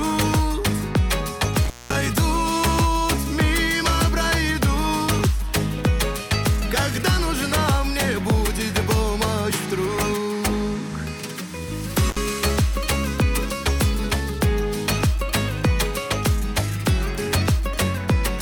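Intermittent contact at 1.65 to 1.95 s and 12.09 to 12.17 s: a loose connection briefly opens, dropping the sound for about 206 ms, then 61 ms, with crackle and faint hiss.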